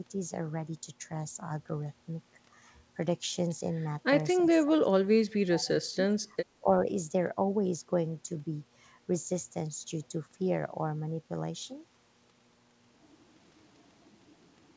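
From 4.45 to 5.69 s, and again at 5.88–6.17, 6.35–6.44 and 6.6–6.66 s, the speech drops sharply, by as much as about 35 dB. This is likely speech suppressed in double talk. The echo canceller, unable to separate both talkers, turned the speech down.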